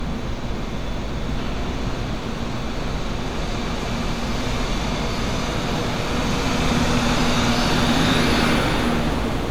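Generation loss runs throughout the clip: the sound is swirly, smeared and hollow, with blurred attacks and nothing above 19.9 kHz, which fits MP3 at 128 kbit/s likely re-encoded around seven times, each pass re-quantising on a shifted frame grid and compounding noise and spectral holes.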